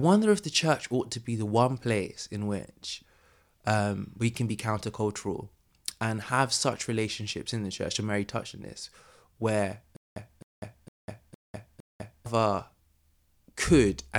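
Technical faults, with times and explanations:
9.96 to 12.26 s, stutter with silent gaps: right after "touched on this where", the speech locks into a short burst of about 0.26 s that returns five times at an even 0.46 s pace, each separated by about 0.2 s of dead silence. The playback likely stalled and replayed its last fragment on each retry before running dry. On a waveform this shows as identical blocks alternating with flat silent stretches, and on a spectrogram as repeated matching slices split by empty vertical bands. The speech meant for that stretch is simply gone.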